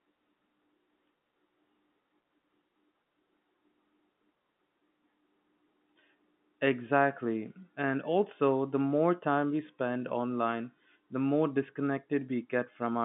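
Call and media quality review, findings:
No faults found; the speech carries the expected telephone-band character, with energy confined to roughly 150 Hz to 3.5 kHz and nothing above about 3.7 kHz, which fits normal G.711 mu-law coding at 64 kbps.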